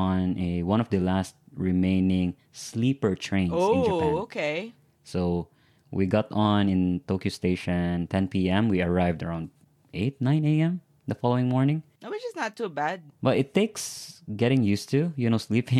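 No technical faults are audible.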